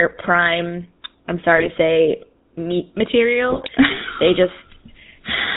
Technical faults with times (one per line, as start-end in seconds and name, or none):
0.00-5.57 GSM full-rate codec
1.57-1.68 GSM bit errors
3.50-3.69 GSM bit errors